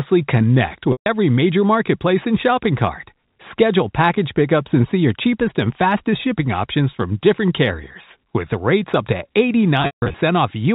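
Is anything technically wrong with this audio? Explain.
Yes, there's packet loss with pitch repetition. At 0.92–1.06 s, just before "every major marketplace and", about 140 ms drops out. After "rates up to", 9.82–10.14 s loses 240 ms in scattered bits, the longest run 160 ms. Each time the receiver loops the last pitch period, giving a brief buzzy hold that fades to silence before the sound returns.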